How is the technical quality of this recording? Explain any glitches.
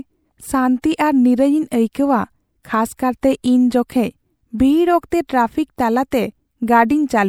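The recording shows pre-echo, a transform-codec artefact, in two places. At 1.93 s and again at 6.11 s, the codec spread quantisation noise across a block in which a sharp attack arrived late, so noise sized for the loud onset leaked into the quiet moment just ahead of it. Each time a short hiss runs before the attack, about 19 ms at the first point and 14 ms at the second, and the onset sounds softened and smeared.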